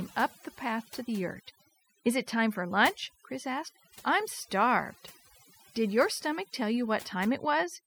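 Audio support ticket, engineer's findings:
Overdone noise removal, whole clip. Background near-silent with twinkling specks. Noise reducer set too strong, cutting individual bands near its noise estimate, quiet speech detail included. Unlike a gate, background isn't just shut between phrases; it stays sparkling throughout.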